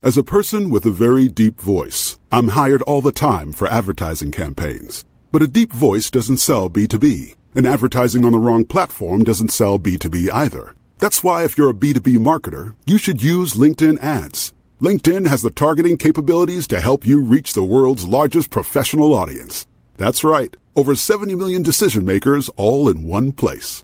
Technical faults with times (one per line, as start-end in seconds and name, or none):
none